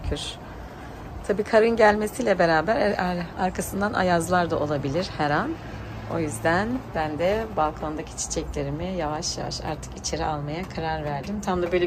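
No technical faults can be heard anywhere in the recording; the signal stays continuous and steady throughout.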